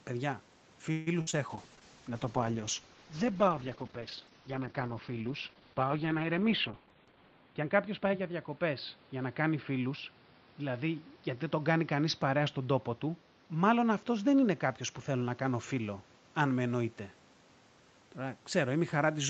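From 0.91 to 1.09 s there is a call audio freeze, most likely because packets were held up in transit and the jitter buffer ran dry. The receiver bridged the wait by stretching the last bit of speech into a fading buzz or hiss for about 151 ms. When the packets arrived, playback carried on from exactly where it had paused. Nothing is lost, but the speech now sits about 151 ms later than before.

A burst of packet loss follows from 1.21 to 1.38 s. This time the packets were actually lost or arrived too late to play, so about 60 ms of speech never reached the decoder. The receiver covered roughly 56 ms of that hole by continuing the preceding sound at falling level, which gives a held, fading buzz or hiss. The speech then jumps ahead, with the stretch in between missing.

Inside that same stretch, at 1.31 to 1.35 s, is a short concealed packet loss of about 20 ms. The decoder synthesised roughly 21 ms from the sound just before, then blended it back into the real signal. 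The result is a brief smear or wobble layered on the larger dropout. A short consonant there can vanish entirely.

At 1.50 s a call bitrate drop begins and lasts until 17.40 s. The bandwidth estimate collapsed, so Opus was pushed from 32 kbps down to 8 kbps and sat at that floor for about 5.6 s. At that rate the encoder halves its audio bandwidth from 8 kHz to 4 kHz. The speech therefore turns muffled, with the sibilance and air gone. It also sounds rough and watery from the coarse coding until the bitrate recovers.

From 6.35 to 8.21 s, while the bitrate is still low, a jitter buffer speed-up is at work. Audio had built up beyond the buffer's target. The receiver shed it by cutting out many tiny pitch-period slices, around 150 ms in total. This plays the speech about 8% fast. The pitch stays where it was, but the delivery sounds slightly hurried over those two seconds.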